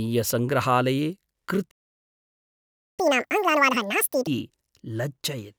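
At 1.70 s the speech just cuts out and sits silent until 3.00 s, a playback stall of about 1.27 s, likely the player starving for data. Right after, from 3.00 to 4.27 s, there's catch-up at higher speed: the backlog plays at 2x, pitched up about ten semitones, chipmunk-style, then settles back.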